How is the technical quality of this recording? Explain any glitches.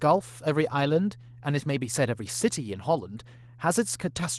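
The recording is marred by one fault that runs through its full length: mains hum under the speech.

Mains hum is present throughout. It is a steady 60 Hz tone sitting roughly 20 dB below the speech. A ground loop or a nearby transformer is letting the power line's alternating current leak into the signal path, so the electrical supply's frequency becomes part of the audio. It sounds like a constant low drone that never changes while the voice comes and goes above it. The speech has also passed through Opus compression, and the only trace of it is light coding damage.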